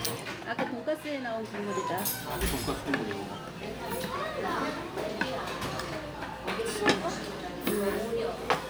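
Nothing in the audio goes wrong at any point; it just carries on as it should, with no faults to point to.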